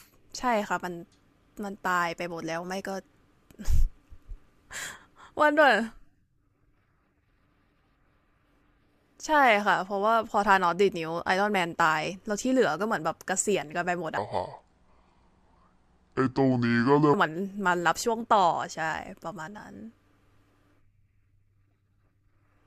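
From 14.17 s to 17.14 s the speech turns deep and sluggish, roughly seven semitones lower and clearly slowed. This section at the wrong speed runs at 0.626 times its recorded rate, likely because that stretch was played against the wrong clock.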